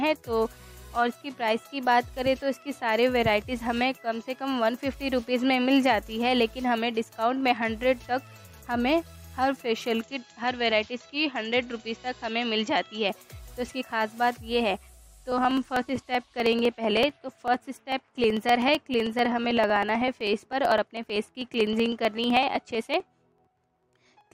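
From 10.01 s to 13.09 s the sound turns duller, with nothing above 7.6 kHz and a faint new noise floor about 45 dB down, likely an input switched to a poorer device. From 14.88 s to 24.27 s, periodic USB or driver dropouts skip roughly half a millisecond of audio every 63.5 ms, around 150 times, heard as steady ticking.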